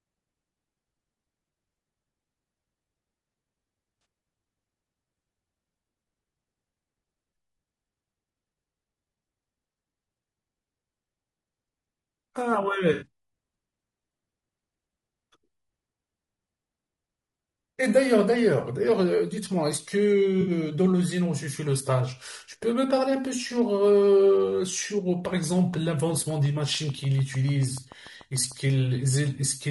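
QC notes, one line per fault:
Throughout: low-delay AAC compression. The speech sounds rough and grainy, with a hiss-like texture sitting between the voice harmonics and a top band that sounds thinned and somewhat synthetic. The likely cause is AAC-ELD at a bitrate that fits about 32 kbps. Its short frames resolve pitch harmonics poorly and leave few bits to spare. On a spectrogram the harmonic stripes look blurred and noise-filled between them, and the upper band appears patchy and smoothed.
4.01 to 4.05 s, 12.93 to 13.06 s and 20.41 to 20.51 s: AAC frame loss with concealment. Each gap sounds like a brief smeared, noisy or phasey patch, lasting about 40, 80 and 60 ms. That fits roughly two, four and three lost frames. The decoder rebuilt the missing frames from the last good spectrum. On a spectrogram each gap shows as a short block of frozen or noise-like energy, and the waveform looks smeared with a softened envelope.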